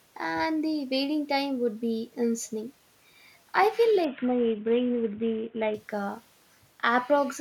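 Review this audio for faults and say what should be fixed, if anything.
From 4.05 to 5.74 s a Bluetooth SBC bit pool drop squeezes the encoder's bit budget, starving the upper sub-bands and quantising the rest coarsely; the speech turns dull and gritty, which fits a fall to a very low bit pool near 54 kbps. Reducing radio congestion or keeping a stronger link between phone and headset would prevent it.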